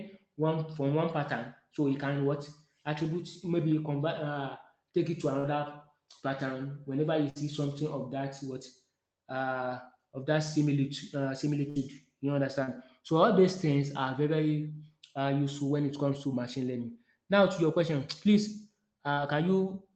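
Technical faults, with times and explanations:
5.39 to 5.51 s, 7.30 to 7.37 s, 11.69 to 11.78 s: burst of packet loss. Each time a run of speech failed to arrive in time, and the receiver extended the last sound for about 50 to 60 ms while fading it down. The first has roughly 48 ms of extended sound, the others about 58 and 62 ms. Speech then resumes further on, with 40 to 60 ms of the original skipped, so each spot is a brief held, dimming sound followed by a jump.
12.64 to 12.69 s and 19.13 to 19.19 s: short concealed packet loss. About 40 ms of audio was lost in each case and filled with roughly 35 to 38 ms of sound continued from what came before, then cross-faded back into the real signal. The patch is heard as a short smear or wobble on the speech, and a brief sound at that point can disappear. The codec's band limit near 8 kHz applies through these patches too.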